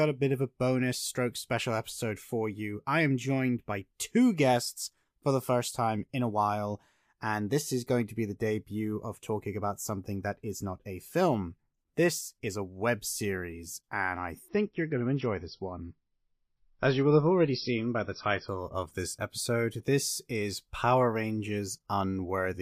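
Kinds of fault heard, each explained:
Adaptive stream at a lower bitrate: the speech abruptly loses treble above 5.8 kHz and gains codec artefacts from 14.48 to 18.48 s, after "web series and I", restoring before "of this episode this" with no gap, which fits a switch from about 128 to about 26 kbit/s MP3.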